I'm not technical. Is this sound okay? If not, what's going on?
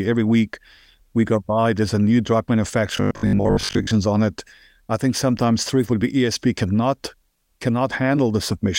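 No. From 2.97 to 3.91 s the speech turns into a robotic sound from repeated short buffers. It becomes a metallic 50 Hz buzz, likely because most of that audio is replaced by repeated 20 ms snippets.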